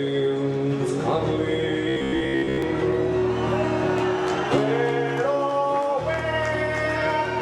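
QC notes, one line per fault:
1.89 to 2.62 s, robotic sound from repeated short buffers: rigid metallic buzz at 66.7 Hz. Likely a 15 ms buffer repeating while most real audio is skipped.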